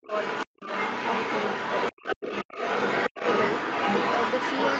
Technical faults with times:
0.02-0.11 speech suppressed in double talk
0.03-4.79 other side's voice leaking through
0.45-0.63 speech suppressed in double talk
1.99-2.19 speech suppressed in double talk

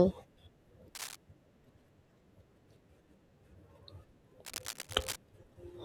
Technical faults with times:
0.95-1.16 cable scratch noise
4.45-5.16 cable scratch noise

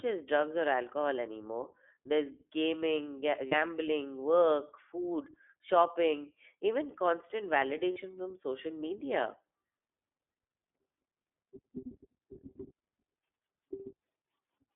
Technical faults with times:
0.00-14.76 iLBC codec
3.48-3.55 lost iLBC frames
7.92-7.98 lost iLBC frames

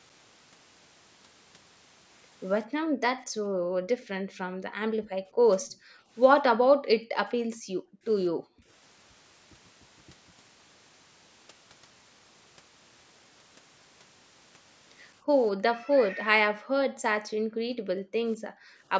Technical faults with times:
2.67-3.01 background gated by the echo canceller
3.27-5.43 background gated by the echo canceller
5.60-5.76 echo leak
5.76-6.10 background gated by the echo canceller
6.52-8.05 background gated by the echo canceller
8.31-8.67 background gated by the echo canceller
15.61-18.84 background gated by the echo canceller

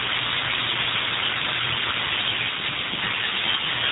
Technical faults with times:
0.00-3.92 G.729 codec

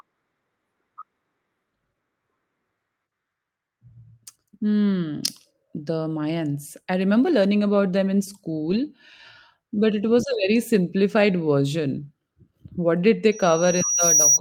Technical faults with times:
8.69-8.75 lost packet rebuilt from error correction
10.25-10.35 lost packet rebuilt from error correction
13.31-14.40 loudspeaker feedback squeal

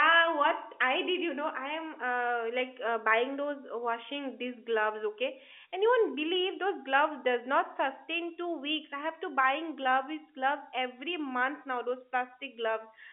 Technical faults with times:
none

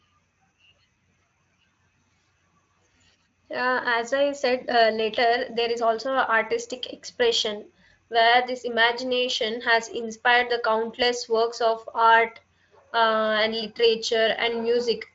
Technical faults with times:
none

